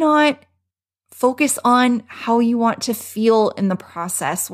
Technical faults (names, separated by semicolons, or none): none